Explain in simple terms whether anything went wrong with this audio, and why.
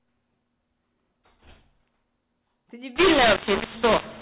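From 2.96 s on, the speech turns harsh and gritty, with noise in the pauses: a mu-law and A-law mix-up, telephone audio decoded on the wrong scale.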